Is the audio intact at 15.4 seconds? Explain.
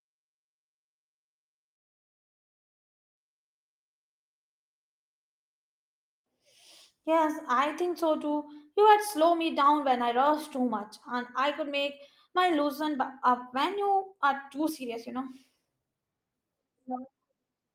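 No. At 15.4 seconds the speech sits inside a jitter buffer speed-up that runs from 11.13 to 16.25 s. The receiver had built up more buffered audio than its target, so it repeatedly cut out short stretches one or a few pitch periods long to drain the excess, dropping roughly a second in total. Playback runs at about 119% speed while pitch stays unchanged, so the speech sounds hurried and compressed rather than higher.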